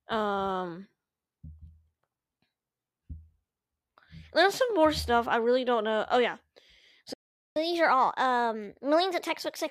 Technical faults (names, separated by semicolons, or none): playback stall; catch-up at higher speed